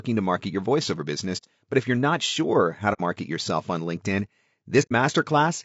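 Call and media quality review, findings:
Rough, grainy speech throughout, noise filling the gaps between harmonics, synthetic-sounding top band. Likely low-delay AAC compression (AAC-ELD) at a low rate, around 32 kbps. Short frames resolve pitch harmonics poorly and starve the bit budget. Distinct from noise suppression or packet loss: the damage is continuous and tied to the voice's harmonic structure, with no gating or gaps.

AAC frame loss with muting, three events: 1.37–1.45 s after "to market your voiceover"; 2.93–3.01 s between "you're not sure how" and "yourself on"; 4.82–4.92 s. Soft-edged holes about 60, 60 and 90 ms long, which points to two, two and three lost frames. The decoder zeroed the spectrum and overlapping windows fade out and back in.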